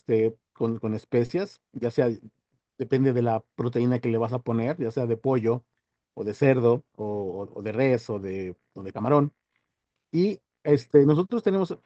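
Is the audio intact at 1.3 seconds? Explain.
No. From about 1.25 to 1.31 s there is short concealed packet loss: roughly 40 ms of the call audio failed to reach the decoder in time, and the receiver filled the gap by extending the preceding sound, carrying its pitch forward where it was voiced or substituting shaped noise where it was not, then crossfading into the real signal. It is heard as a brief smear or wobble, and any short consonant in that span can disappear.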